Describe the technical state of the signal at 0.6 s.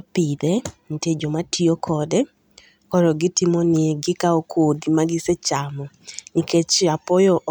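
At 0.59 s there's a block of digital silence: about 0.67 ms of samples dropped out, roughly a 32-sample block, so the abrupt edges give a tiny tick in the speech.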